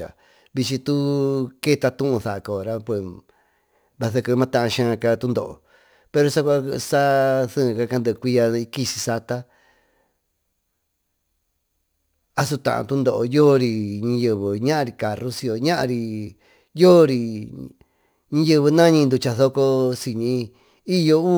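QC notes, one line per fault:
Throughout: crude rate conversion. There's a gritty, inharmonic fizz riding under the speech, strongest on loud and bright sounds. It fits a 48 to 44.1 kHz change done by just dropping samples with no filtering, leaving junk tones roughly 30 dB down.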